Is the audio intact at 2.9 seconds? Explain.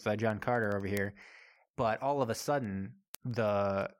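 No. At 2.9 s the speech sits inside a run of word clock ticks lasting from 0.14 s to 3.98 s. The receiving device is running on its own clock, off from the sender's by a few hundred parts per million, so roughly every tenth of a second the two slip past each other and a single sample is dropped or repeated. Each slip is a short tick. On a spectrogram these appear as thin, evenly spaced vertical broadband lines. In the waveform each one is a one-sample step.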